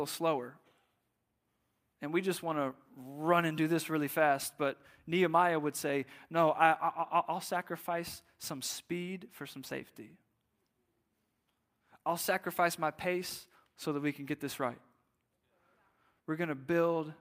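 No technical faults can be heard in this speech recording.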